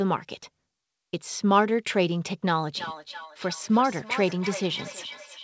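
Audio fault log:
2.68 to 5.43 s, feedback echo between two devices: the speech keeps coming back roughly every 300 ms, peaking about 13 dB under the speech itself, because a second device in the room replays the call and its microphone sends it round again, past an echo canceller that only knows its own output.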